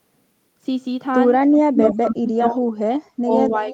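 At 1.53 to 1.59 s a faint echo leak appears: a delayed copy of the speech, trailing it by 276 ms and roughly 20 dB below it. It likely comes from a loudspeaker on one end whose echo canceller let part of the pickup through. It returns more strongly, only about 10 dB down, from 1.75 to 1.94 s, again at 276 ms. The fixed, identical delay both times separates this from room reverberation, which would smear into a decaying tail rather than repeat as a distinct second copy.

Overlapping that, from 1.72 to 2.67 s, the speech is suppressed in double talk, for about a second in total. The level dips by up to roughly 30 dB while the other side is talking, probably because the echo canceller could not separate the two and turned everything down. The same happens from 2.84 s to the end, with drops near 40 dB. These are gain dips that follow the overlap, not the abrupt silent holes and glitches of lost packets.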